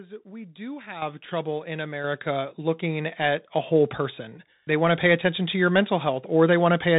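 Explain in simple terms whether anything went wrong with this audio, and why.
Two things went wrong. Throughout the recording the sound passed through a Bluetooth CVSD headset codec, the narrowband link headsets use for calls. It describes the sound one bit at a time, only saying whether the wave goes up or down. Nothing above about 3.8 kHz gets through, so the speech sounds muffled and boxy, s sounds come out scratchy, and a grainy hiss sits underneath.

The second problem is the microphone volume stepped up, twice. The calling software judged the microphone too quiet and turned up its input volume in a single jump. At 1.02 s, between "we do" and "trouble in", speech and background noise suddenly get clearly louder together. At 2.04 s, just before "looking at a whole", a second, smaller jump pushes the level up again.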